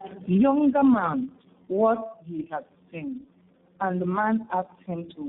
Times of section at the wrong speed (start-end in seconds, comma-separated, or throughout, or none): none